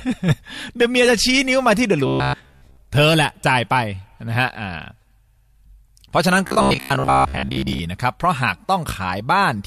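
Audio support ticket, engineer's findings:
Robotic sound from repeated short buffers, 2.07–2.77 s. Audio arriving too seldom at playback, likely buffer underrun; last 15 ms looped to fill gaps, most of the real signal skipped. Result: rigid metallic buzz at 66.7 Hz.

Same fault, 6.47–7.79 s, longer stretch. Playback again likely fed from repeats of a 15 ms buffer. Identical 66.7 Hz buzz for over a second.

Repeated frames, 5.27–5.46 s. Compressed block of about 93 ms re-sent or re-written upstream, decoder playing it twice more. Audible stutter. Clip lengthened by 185.8 ms.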